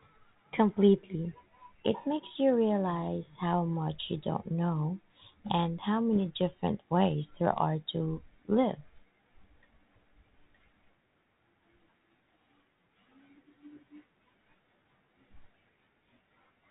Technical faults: bit errors on an ADPCM link

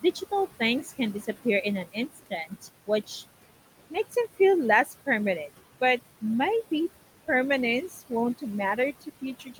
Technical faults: overdone noise removal; noise suppressor artifacts; speech cut by the noise suppressor

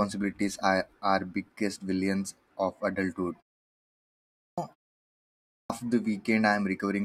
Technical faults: clipped start after a pause

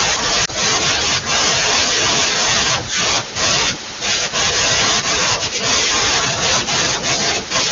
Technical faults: lost AMR speech frames

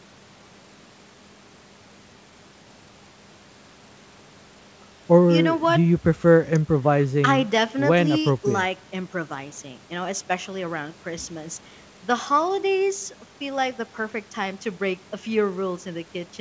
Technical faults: none

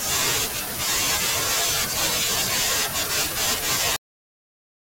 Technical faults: cut-off end

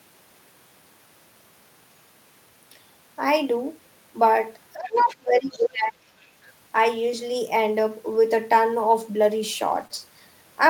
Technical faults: speech suppressed in double talk; other side's voice leaking through; lost packet rebuilt from error correction; short concealed packet loss

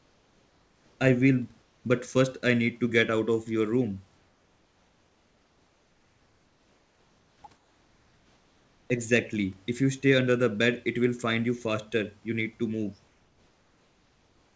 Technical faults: comfort noise in place of the background

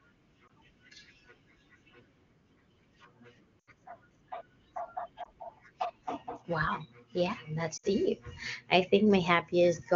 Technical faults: lost AMR speech frames

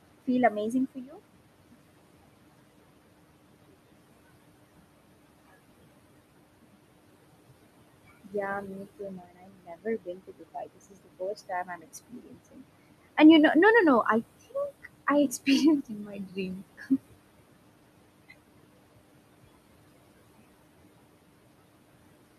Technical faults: noise suppressor artifacts; speech cut by the noise suppressor

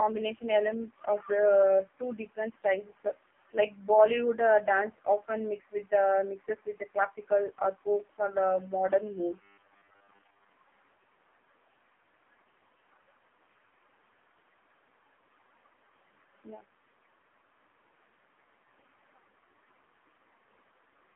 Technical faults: AMR narrowband mobile codec; robotic sound from repeated short buffers

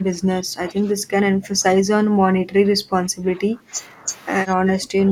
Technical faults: speech suppressed in double talk

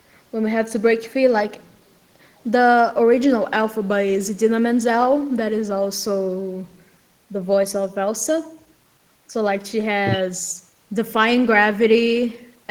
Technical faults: none

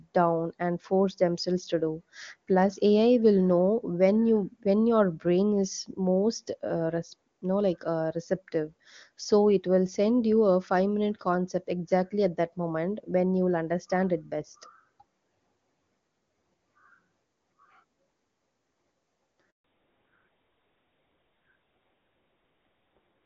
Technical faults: handover gap; fallback to narrowband

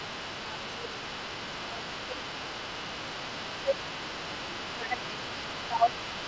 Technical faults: other side's voice leaking through; speech suppressed in double talk

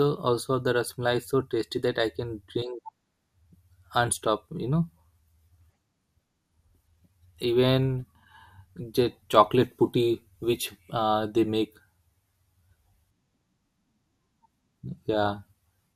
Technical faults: DAB burbling

